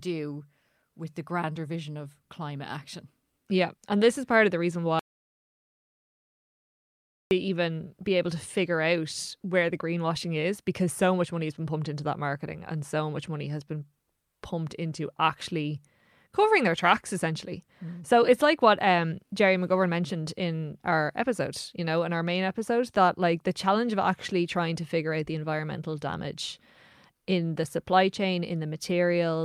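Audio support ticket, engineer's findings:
Audio dropout to silence, 4.99–7.31 s, after "part of the reason", resuming at "even be able to". Roughly 2.3 s of silence, no room tone. Likely input loss (device disconnect, link failure or mute) while the recorder kept writing silence.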